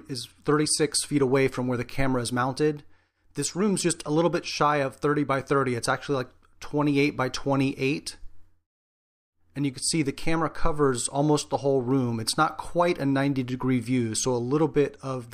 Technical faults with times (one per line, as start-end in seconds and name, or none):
3.53 corrupt frame decoded